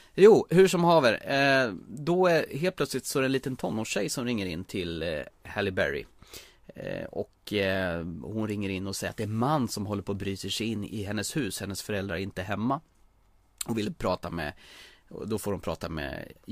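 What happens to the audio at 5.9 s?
Nothing goes wrong at 5.9 s; the speech runs through that moment intact, with no dropout, click, glitch or other fault to be heard.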